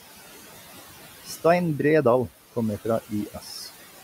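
Right from the start there are noise suppressor artifacts. The suppressor is pulling the steady background down by about 12 dB, deciding band by band and frame by frame what counts as noise. The room noise, sitting about 18 dB under the speech, ends up pumping: it sinks in the gaps and comes back up under the talking.

Then, between about 3.09 and 3.5 s, you get speech cut by the noise suppressor. It mistakes some of the softer speech energy for background and turns it down along with the noise, by as much as about 11 dB at the deepest point. Only something like 150 ms of that stretch is really hit, but those bits sound swallowed and faint, as if the edges of the sounds just drop away.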